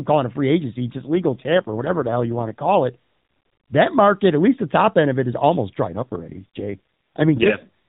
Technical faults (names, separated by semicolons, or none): AMR rate drop